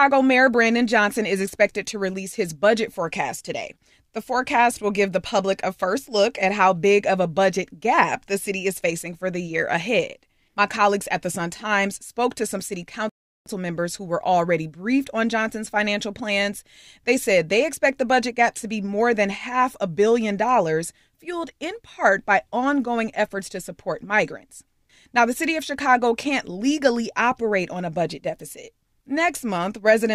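At 13.09 s the speech drops into silence and stays there until 13.46 s. That is a rebuffering stall. The player used up the audio it had already downloaded and stopped to wait for more data. The pause adds about 0.37 s to the running time. Nothing is skipped. When playback returns, the speech picks up exactly where it broke off. The result is an abrupt gap in mid-flow, not a jump or a cut.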